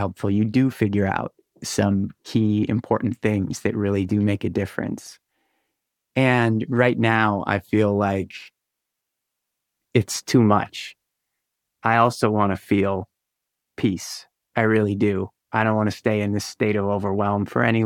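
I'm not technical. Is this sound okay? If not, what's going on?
Yes, the recording is technically sound, with nothing going wrong in the signal at any point.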